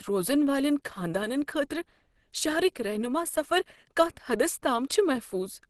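From start to finish the speech has a hoarse, muffled edge, with nothing above about 12.1 kHz. That's likely Opus compression working in its hybrid speech mode, and the damage is plainly audible, which fits a bitrate down around 16 kbps.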